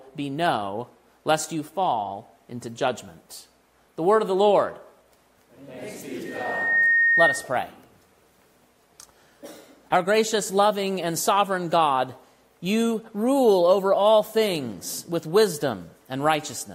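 At 6.25 s a loudspeaker feedback squeal starts. A mic-speaker loop rings at 1.8 kHz, swelling within half a second to about 5 dB above the sound, until 7.51 s.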